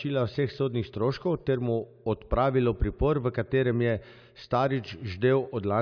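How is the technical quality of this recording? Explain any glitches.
Nothing in this speech recording stood out as a technical problem on listening.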